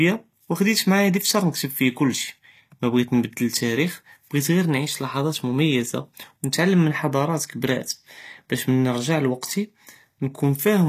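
From start to finish the speech carries plainly audible HE-AAC compression damage, likely from encoding at a low rate that fits about 24 kbps. Only the lower spectrum is truly coded; the treble is rebuilt by copying lower bands upward, so s sounds come out gritty and metallic. On a spectrogram the upper band shows repeated, blocky copies of lower patterns whose harmonics don't line up, and everything stops flat at 14.9 kHz.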